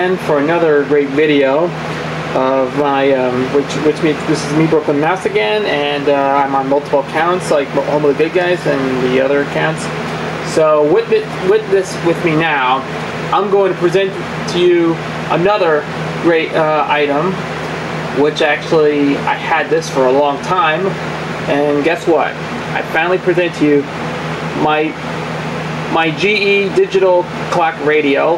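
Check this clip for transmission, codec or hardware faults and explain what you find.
One hardware-side fault runs through the whole clip: gain pumping. The input gain was likely set far too high for the microphone, so a fast limiter or compressor keeps clamping down whenever the level peaks, then lets go. Throughout, the gain swings by around 10 dB. Loud and quiet passages sit unnaturally close together, giving a squashed, breathing quality.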